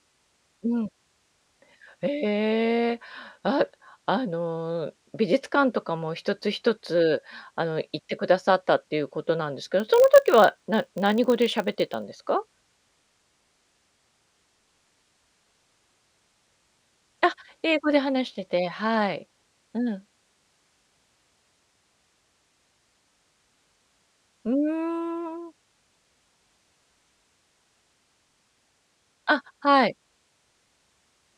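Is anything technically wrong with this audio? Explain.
Yes, there is one fault in this speech clip.

A filter restarted on every block runs from 9.8 s to 12.04 s. The processing filter discards its internal state at each block boundary, so every block starts from silence instead of continuing smoothly from the one before. Each restart leaves a small transient, and here they repeat at 50 Hz, pointing to blocks roughly 20 ms long. The result is a low, regular buzz laid over the speech that rises and falls with its level.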